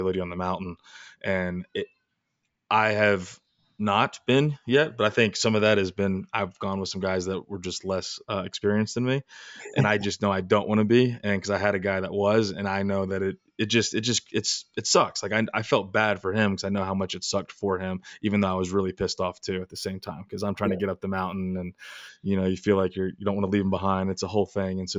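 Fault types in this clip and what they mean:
Imaging from linear upsampling: from 19.58 to 22.09 s, after "was really pissed off", the speech loses its top end and gains a faint metallic shimmer between 8 and 16 kHz, around 30 dB down. This fits straight-line interpolation from 16 kHz to 44.1 kHz, which leaves mirrored spectrum copies.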